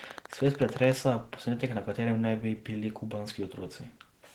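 From the start and for the whole clip, the speech has most likely passed through Opus compression at a low bitrate, which fits about 16 kbps in the codec's hybrid speech mode. The damage is plainly audible: the speech sounds hoarse, although the band still reaches about 20.1 kHz.

From 0.04 to 0.93 s, just before "posnetek na", a train of clicks rides over the speech. Interference or a faulty connection is the likely source, injecting around fifteen similar pulses at a regular 13.6 per second. They peak roughly 10 dB above the speech and are heard as steady ticking.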